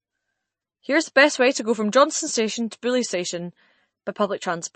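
A low-bitrate encode, likely MP3 compression, starved the speech of bits throughout, cutting everything above 8.3 kHz and leaving a watery, swirly texture that fits roughly 31 kbps.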